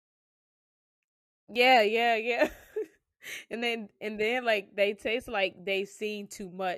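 Three tiny skips cut into the speech at 1.56 s, just before "yeah yeah", at 3.53 s, right before "then and then like", and at 5.53 s, after "then like they taste". It's overlap between stream segments: the 2-second chunks' timestamps overlap, real audio gets trimmed, and the waveform jumps.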